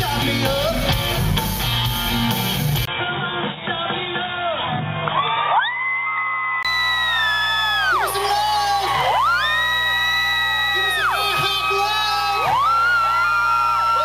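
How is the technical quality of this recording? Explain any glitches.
The recording has two faults: a mains buzz under the whole clip, and a stretch where the sound drops to a narrower band.

Mains buzz runs from start to finish, sitting roughly 20 dB below the signal. Sharp switching spikes at twice the 60 Hz mains rate leak into the signal path, producing a steady, raspy buzz rather than a smooth hum. On a spectrogram it appears as evenly spaced horizontal lines at multiples of 60 Hz climbing well up the range. In the waveform it shows as a repeating spiky ripple visible in the quieter gaps.

From 2.85 s to 6.65 s the sound turns dull and boxy, and then clears again. The likely cause is an input switched to a poorer device: the system changed to a different microphone or a headset call profile mid-recording. There is a 20 ms silence at the switch, and the level stays about the same. On a spectrogram everything above 3.8 kHz vanishes for that span, giving a sharp ceiling. 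The new device's own background noise sits around 55 dB below the signal.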